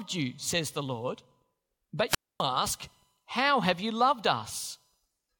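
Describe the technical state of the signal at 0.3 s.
The signal at 0.3 s is intact, with no fault audible at that moment.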